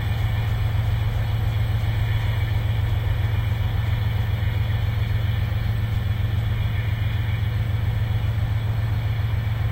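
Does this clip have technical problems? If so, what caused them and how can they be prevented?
No, there are no technical problems to point to in this clip. Nothing in the sound calls for a cause to trace or a step to prevent it.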